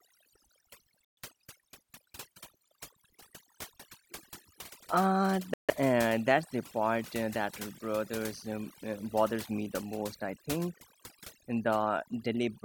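A speech recording with two faults. Overdone noise removal runs through the whole clip. The background drops, dotted with small twinkling specks. The reduction was set far too hard. It pushes individual frequency bands down or off whenever they come close to its noise estimate. Quiet parts of the voice fall under that threshold and vanish with the noise. The specks are isolated bands that flicker above and below the cut. Twice the sound drops out completely and then resumes. The first gap runs from 1.05 to 1.18 s, with about 125 ms of silence. The second runs from 5.54 to 5.71 s, with about 150 ms of silence. These are likely Bluetooth stalls. Interference would have delayed packets to the headphones. Their buffer then emptied, and playback paused until resent packets arrived.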